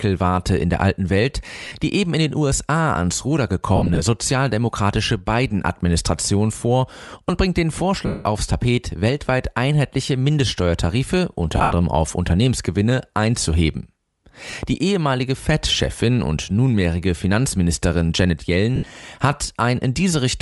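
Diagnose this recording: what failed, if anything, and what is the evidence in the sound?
The codec stage is the weak point: the speech has a breathy, grainy edge throughout, with the top end thinned and noise-filled. That's likely Bluetooth LC3 compression, consistent with around 48 kbps on 10 ms frames, where upper spectrum gets zeroed and noise-substituted.

Network/link stage: lost LE Audio frames at 1.65–1.75 s (before "die eben in den"), 3.76–4.01, 8.06–8.25 (after "vor und bringt den"), 11.57–11.72, 14.51–14.53 and 18.76–18.90 s. Each gap turns into a noisy smear as the decoder replays the last spectrum with scrambled signs, fading on longer losses.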